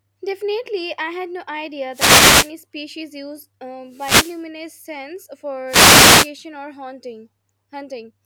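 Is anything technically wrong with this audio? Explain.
Yes. The speech is hit by three wireless microphone noise hits, at 1.91–2.52 s, 3.88–4.45 s and 5.66–6.31 s, each lasting about 0.6 s. In an analogue FM radio link, reflected paths cancel the direct signal at the receiver, so the carrier fades and the receiver's own noise rises through the demodulated audio. Each event sounds like a short swish or burst of static that partly masks the speech.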